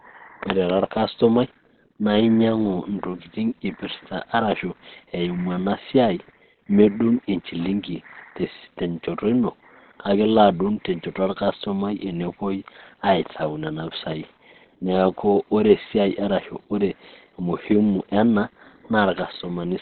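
From start to finish the speech is muffled and hoarse, with nothing above 4.3 kHz and heavy codec damage rather than swirling or watery holes, which points to Opus compression, likely in its narrowband SILK speech mode at a low rate around 12 kbps.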